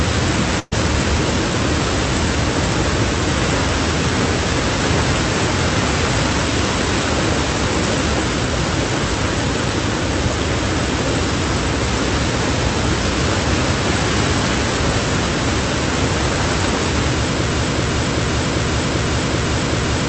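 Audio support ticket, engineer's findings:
Burst of packet loss, 0.59 to 0.73 s. About 120 ms of audio missing from the stream. Receiver concealment extends the last sound and fades it over roughly 120 ms, then about 20 ms of silence before playback resumes further on. Jitter buffer or network on the call leg. Band-limited to around 8 kHz with coding noise typical of Opus at a low rate, consistent with roughly 32 kbps.

Broken-record loop, 17.52 s to end of clip. A 388.6 ms fragment repeats exactly, back to back, seven times, with no new audio after the loop starts. Likely cause is a stalled player, encoder or stream resending its last buffered fragment. The audio for that final stretch is lost.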